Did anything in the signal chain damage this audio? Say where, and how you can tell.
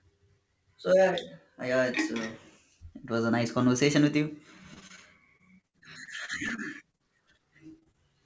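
Yes, network stage. Repeated packet loss gives choppy, robotic speech at 4.74–4.99 s, 5.37–7.01 s and 7.67–7.96 s. Each lost packet is patched by extending prior sound.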